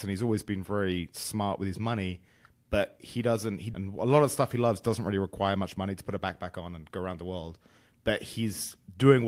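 At 3.73 to 3.75 s the speech lurches forward with no gap, as if about a second of it were simply cut out and the two edges butted together. This is a skip ahead: with later audio already queued, a stretch was dropped in transit or discarded by an overflowing jitter buffer, pulling playback delay down by roughly a second.

Right after "doesn't really require much", from 5.77 to 7.39 s, the talker sounds rushed, running at about 111% speed while the pitch stays put. This is a jitter buffer speed-up: holding more audio than its target, the receiver repeatedly trimmed short pitch-period slices, removing around a fifth of a second to shrink the delay.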